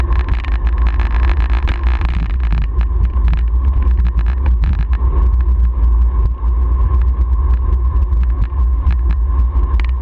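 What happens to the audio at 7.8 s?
Nothing goes wrong at 7.8 s; the audio plays through that moment intact, with no dropout, click or distortion.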